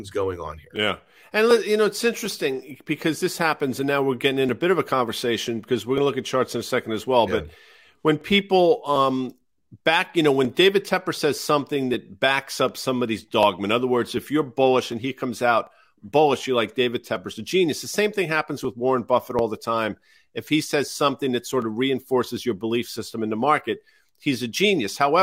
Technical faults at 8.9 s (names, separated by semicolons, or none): clock drift buffer slips